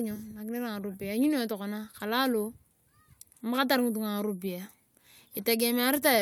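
Nothing stood out as a technical fault on listening to this speech recording.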